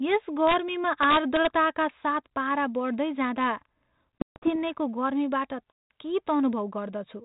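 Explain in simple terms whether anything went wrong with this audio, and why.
Two separate problems show up in this speech clip.

The first is integer overflow, at 0.47 to 0.54 s and again from 1.03 to 1.47 s. The loudest moments were pushed just past the biggest number the audio could store, and instead of being capped, those peaks wrapped around to the opposite extreme. So you hear sharp, violent cracks on the loud bits, much nastier than ordinary clipping, even though the level was only barely over the edge.

The second is packet loss on an ADPCM call, at 4.19 to 4.56 s and 5.73 to 5.91 s. Chunks of the call simply went missing and were replaced by silence: about 200 ms in the first stretch, scattered as several gaps with the longest about 140 ms, and about 180 ms in the second. That fits roughly ten small packets dropping each time. The decoder works by predicting each sample from the ones before it, so after a hard-edged hole it's briefly out of step with the sender. 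The speech comes back slightly distorted, then settles within a few tens of milliseconds. The G.726 phone coding itself, with its phone-band limit and light coding grit, is working as normal.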